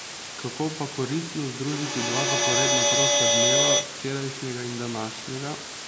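A constant, even hiss sits under this speech recording from start to finish, roughly as loud as the speech itself. This is low bit depth with dither: the signal is reduced to 3 bits, and the added dither turns the rounding error into steady white noise rather than distortion. From 1.67 to 4.04 s, the speech comes back again and again roughly every 150 ms, each return thinner and more ringing, building up to about 8 dB above the speech instead of fading. That is feedback echo between two devices, where one device replays another's microphone, which then picks the sound up again. Neither device's echo canceller removes the other's playback. The call microphone processing leaves nothing above 8 kHz, which is expected for that path.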